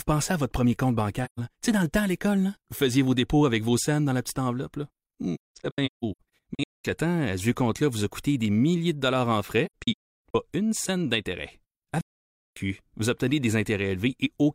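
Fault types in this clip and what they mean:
AAC frame loss with muting: missing frames decode as silence, leaving soft-edged gaps in the speech at four points, two broken into scattered holes.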